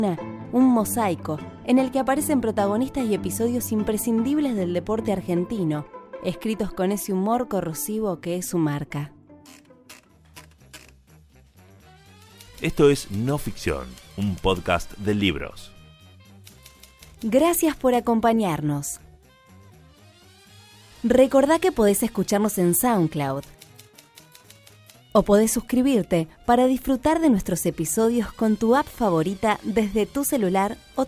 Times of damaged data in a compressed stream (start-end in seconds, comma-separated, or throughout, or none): none